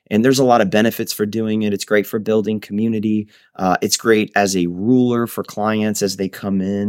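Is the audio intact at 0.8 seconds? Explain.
Yes, at 0.8 seconds the speech is intact, with no dropout, click, distortion or other fault to be heard there.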